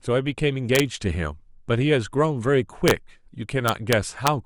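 Integer overflow cracks the speech at 0.75–0.80 s, 2.88–2.91 s and 3.68–4.28 s: peaks past the integer limit wrap to the opposite sign, far harsher than clipping's flattening.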